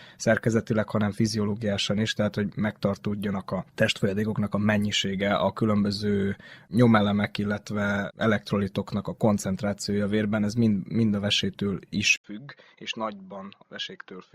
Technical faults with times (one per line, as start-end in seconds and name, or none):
12.16-14.35 input switched to a poorer device